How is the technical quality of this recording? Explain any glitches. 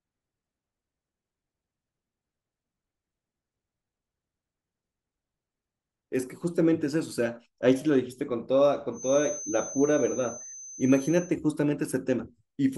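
The recording has one clear fault, a feedback whistle. From 8.90 s to 11.37 s a thin, steady tone at 6.2 kHz sits behind the speech, well below its level, swelling and fading slowly in loudness. The cause is likely a loudspeaker-to-microphone loop held just at the edge of feedback: one high frequency is reinforced enough to sustain itself on each pass without growing into a howl, so it persists as a faint whistle.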